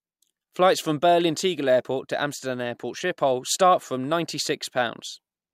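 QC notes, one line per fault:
No faults found in the speech.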